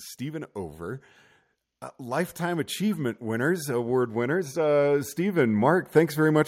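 From 1.97 s to 6.43 s the automatic gain rises: the gain control judges the input too quiet and slowly raises it by about 10 dB. Voice and background noise swell together, steadily rather than pumping with each syllable as compression would.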